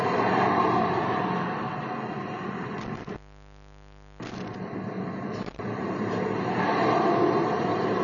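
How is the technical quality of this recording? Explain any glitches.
The recording has two problems: band-limited, smeared sound throughout, and two dropouts in the middle.

AAC compression (likely cause), throughout: nothing is present above 7 kHz, and the remaining sound is dull and smeared with a warbling texture. This fits AAC-LC at a low bitrate, around 24 kbps, where the encoder lowers its cut-off and coarsely quantises frequency lines.

Intermittent contact, at 2.78 to 4.57 s and 5.42 to 5.66 s: a loose connection momentarily breaks the signal path. The sound cuts out, for about 1.04 s in the first case and about 0.10 s in the second, with crackle at each break and reconnection and faint hiss while the line is open.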